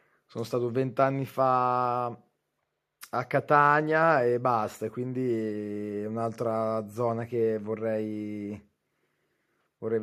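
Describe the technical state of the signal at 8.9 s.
At 8.9 s the speech signal is intact, with no audible dropout, distortion, glitch or other technical fault at that point.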